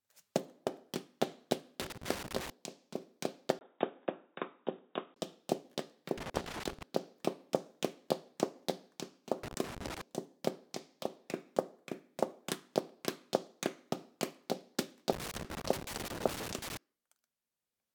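Loose connector crackle first appears from 1.80 to 2.50 s: an irregular burst of scratchy crackle, as a worn or dirty contact repeatedly makes and breaks the signal path, chopping the audio and adding pops wherever DC sits on the line.

From 3.59 to 5.16 s the sound abruptly turns dull and boxy, with nothing above 3.8 kHz, after a 20 ms gap at the switch, most likely an input switched to a poorer device. The level stays about the same, and a faint new background noise sits far beneath the signal.

The same loose connector crackle returns from 6.18 to 6.83 s, from 9.43 to 10.01 s, and from 15.13 to 16.77 s, each time as a ragged spell of scratching while the faulty contact shifts.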